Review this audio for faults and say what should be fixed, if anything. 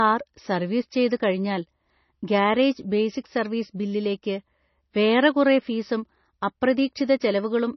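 The speech appears to have been squeezed through a very low-bitrate MP3 encoder and then saved again as a high-bitrate MP3, likely a case of low-bitrate audio saved at a high bitrate. The second encoding cannot restore what the first one threw away. Throughout the 7.8-second clip nothing is present above 6 kHz, which fits an original near 24 kbit/s, so the speech sounds dull and muffled, and the first codec's artefacts carry through unchanged. To prevent this, re-encode only from the original uncompressed or high-quality master, never from a low-bitrate copy.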